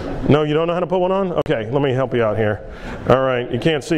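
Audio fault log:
1.42–1.46 s, Bluetooth dropout: the output drops to silence for about 44 ms, then resumes as if the sound had kept running underneath. This was likely caused by a few wireless audio packets arriving too late and being discarded, leaving a hole.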